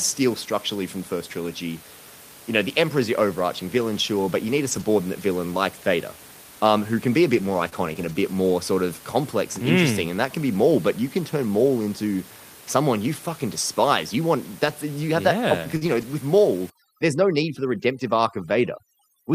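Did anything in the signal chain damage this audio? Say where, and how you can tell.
Yes. Network stage, 3.77 to 9.69 s: scattered short gaps. There are about three tiny dropouts, none longer than about 20 ms. The receiver bridged each by extending the preceding sound. So you hear brief ticks and hiccups, not silences.

Network stage, 15.77 to 15.83 s: short concealed packet loss. About 40 ms never arrived in time. The decoder continued the last sound for 45 ms and then faded back in. It is heard as a quick smear or wobble.

Codec stage, 15.81 to 16.03 s: a lost packet rebuilt from error correction. Six packets were replaced by the low-bitrate copies carried in the next packets, about 120 ms in all. Nothing drops out, but those frames sound rougher and noisier.

Call processing, 16.7 s to the end: overdone noise removal. The suppressor cuts any frequency band near its noise estimate, and quiet parts of the speech go too. 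Room noise sits about 21 dB below the speech, but here the background collapses to twinkling near-silence.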